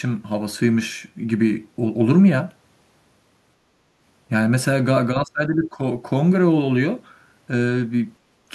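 Speech suppressed in double talk occurs from 5.22 to 5.79 s, where the talker's speech sinks by around 20 dB for about half a second. This likely happened because the echo canceller, facing both ends talking at once, could not tell local speech from loudspeaker echo and attenuated everything.

Background gated by the echo canceller follows at 8.24 to 8.41 s. The room sound drops by about 15 dB for a brief moment as the canceller clamps the microphone while the loudspeaker plays, then comes back once it releases.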